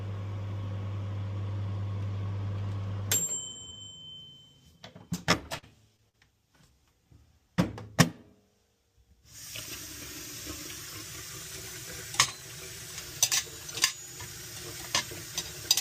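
From 5.31 to 6.15 s, repeated packet loss leaves four gaps, the longest 44 ms, filled by extending prior sound, giving a choppy, robotic texture. From 11.01 to 12.99 s, playback runs 5.3% fast and about 89 cents sharp before snapping back, likely a drift correction step in clock-matching software.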